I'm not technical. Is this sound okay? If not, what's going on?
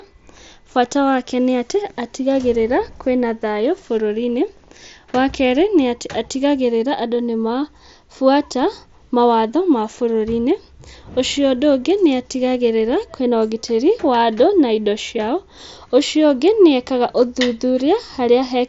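No. At 1.97 s, after "bata wake nĩ atĩ", a concealed Bluetooth headset packet loss dropped a tiny slice of sound. The phone filled it by copying what came just before, so it's barely noticeable.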